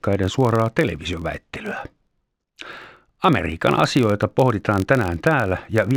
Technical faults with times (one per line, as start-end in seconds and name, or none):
0.00-5.97 filter restarted on every block